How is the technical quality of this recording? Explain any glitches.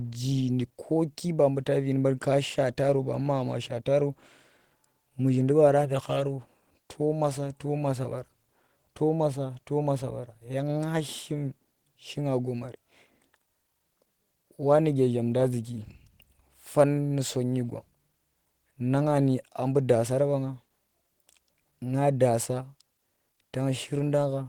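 No glitches or technical faults can be heard here.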